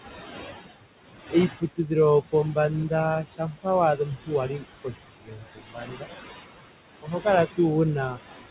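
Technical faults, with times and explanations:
Throughout, noise suppressor artifacts: the steady room noise is pulled down by about 19 dB frame by frame, so it sinks in the gaps and swells back under the speech.
1.60–1.91 s, 3.24–3.66 s, 3.96–4.32 s, 4.48–4.68 s, 4.84–6.09 s, 7.02–7.26 s and 8.09–8.19 s, speech cut by the noise suppressor: the suppressor mistakes quiet parts of the speech for noise and lowers them by about 10 to 22 dB. Soft sounds and endings come out swallowed, with the longest run lasting about a second.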